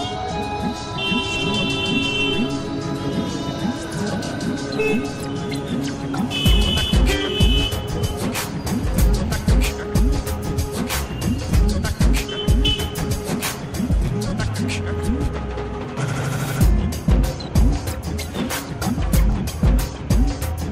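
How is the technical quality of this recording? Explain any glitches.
Overlapping chunks cause a regular glitch at 4.25, 9.28, 14.3 and 19.32 seconds. The audio was handled in 5-second chunks, each starting about 23 ms before the previous one ended, so that sliver plays twice at every join. Each repeat is heard as a brief click or stutter.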